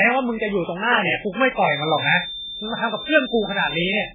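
From the start, the speech carries heavy MP3 compression damage: nothing survives above 3.7 kHz, and weak spectral lines drop in and out between frames, giving a watery, swirling texture with smeared attacks. This points to a very low bitrate, likely around 8 kbps.

From 1.53 s to the end, a feedback whistle sits steadily at 3.6 kHz, roughly 10 dB below the speech. The loudspeaker-to-microphone loop is likely held just short of runaway gain, so a single thin tone keeps ringing behind the speech.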